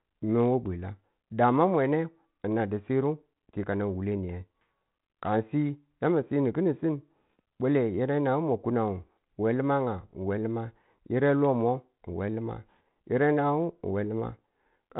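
Speech, with no technical faults to report.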